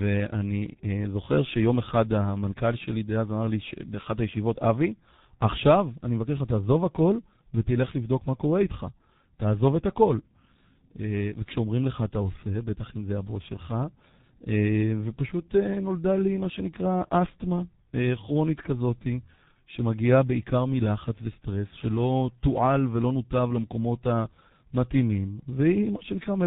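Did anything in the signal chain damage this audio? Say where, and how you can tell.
Yes: tandem speech coding throughout, at the codec stage. Speech sounds rough, muffled and warbly, nothing above 3.8 kHz, consistent with two speech codecs re-encoding in series, ending in G.723.1.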